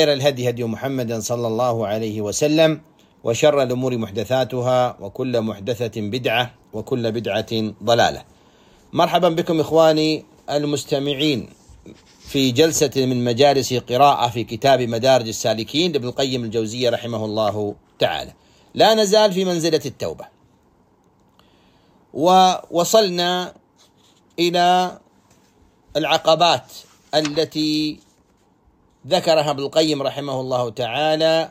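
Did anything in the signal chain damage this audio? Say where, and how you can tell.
No, nothing in the chain audibly damaged this audio, and no stage left a mark that can be heard anywhere in it.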